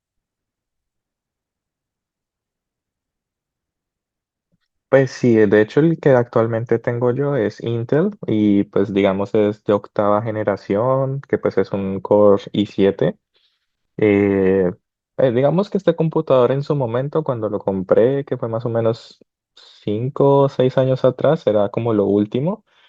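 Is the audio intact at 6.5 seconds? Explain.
Yes, the speech at 6.5 seconds plays through intact, with no dropout, click, distortion or other audible fault at that point.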